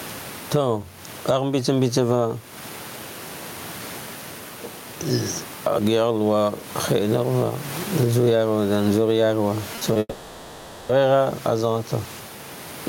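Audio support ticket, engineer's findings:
Gain pumping, whole clip: input gain likely set far too high, with a fast limiter clamping each loud syllable. Gain swings by around 15 dB; dynamics flattened. Room noise sits about 30 dB below speech.

Short concealed packet loss, 9.75–9.83 s and 9.93–9.97 s: roughly 20 ms chunks missing, decoder extrapolated the preceding sound and crossfaded back. Brief smears or wobbles; short consonants in those spans may vanish.

Long network dropout, 9.99–10.91 s: stream most likely stalled in transit for about 0.9 s. Concealment stretches the last sound into a fading buzz or hiss, with about 30 ms of near-silence. Audio resumes afterward, missing that stretch.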